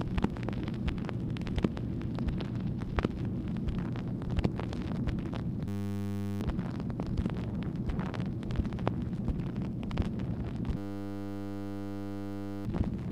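A system hang loop hits at 5.68–6.41 s and again at 10.77–12.65 s: a 10 ms slice of audio repeats exactly, producing a steady 100 Hz buzz, as the machine stalls while the hardware keeps replaying one ring buffer, dropping roughly 0.7 s and 2 s.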